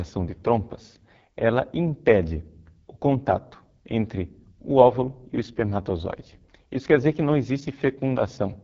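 Throughout, the AMR wideband (HD Voice) codec leaves the speech rough and raspy, with nothing above 7.5 kHz. That heavy damage fits its lowest 6.6 kbit/s mode, unlike a clean wideband band-limit.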